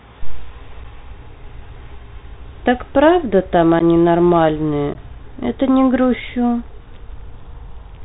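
Bluetooth CVSD headset codec damage runs through the whole of this speech clip and is plainly audible. Nothing above 4 kHz survives, consistent with a 64 kbps CVSD link that codes one bit per sample, each bit simply stepping the waveform up or down with an adapting step size. When loud, high-frequency energy rises faster than that step can follow, it distorts, so s sounds come out scratchy and a granular hiss sits beneath the speech. Unconcealed Bluetooth headset packet loss breaks in at 0.84 s, from 3.79 to 3.82 s, and from 4.94 to 4.97 s, each time a couple to a few short voice packets dropping between headset and phone. The missing audio totals about 7.5, 11.2 and 15 ms, replaced by silence or an idle pattern with no attempt to fill it, leaving abrupt holes. The speech returns briefly quieter as the CVSD step size rebuilds.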